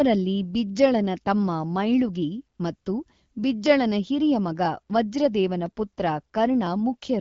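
Just after "ಬಿಜ್ಜಳನ ತಮ್ಮ ಮೈಳುಗಿ", the AMR comfort noise cuts in: speech frames stop at 2.57 to 2.59 s and 2.75 to 2.85 s, and smooth synthetic hiss replaces the real background.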